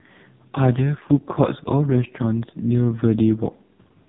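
From start to finish the speech sounds buzzy, synthetic and muffled, with nothing above 3.8 kHz: AMR narrowband mobile codec damage, heavy, consistent with its lowest 4.75 kbps mode.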